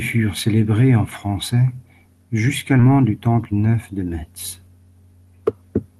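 At 2.79 to 2.81 s the speech jumps abruptly forward, with roughly 0.4 s missing and the two sides joined with no gap. This is a skip ahead: a stretch of speech was dropped, on the way or by the jitter buffer, while later audio was already waiting.

From 2.89 to 3.83 s the speech sounds hurried, running at about 112% speed with unchanged pitch, so about a tenth of a second is squeezed out. This is a jitter buffer speed-up: the receiver had more audio queued than its target delay and removed short pitch-period-sized pieces, one after another, to shrink it.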